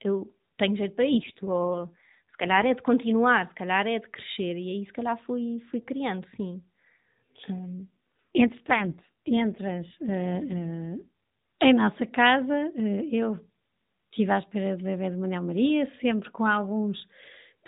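From 1.10 s to 2.66 s, between "eu tenho jeito para" and "é de continuar se", the speech turns rougher and more synthetic with no gap and no change in bandwidth. This is an AMR rate drop, which fits the mobile codec falling from the 12.2 kbps mode to 5.9 kbps, with fewer bits left to model the voice. The same coarsening recurs from 7.59 s to 11.08 s, ending just before "em nossa casa eu".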